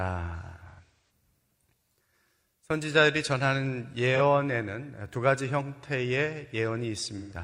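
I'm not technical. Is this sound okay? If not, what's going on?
No, not quite. There are three spots of AAC frame loss with concealment. Chunks of the compressed audio went missing, and the player papered over each gap by reusing the last good bit of sound. The worst is 0.69 to 1.10 s, where about a third of a second is patched, mostly in one stretch, so the speech goes smeared and hollow there. There are shorter noisy blips at 4.15 to 4.20 s and 7.18 to 7.34 s.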